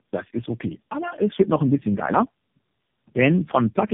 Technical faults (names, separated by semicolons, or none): tandem speech coding